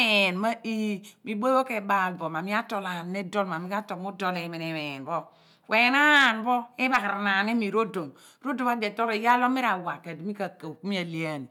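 No audible technical faults.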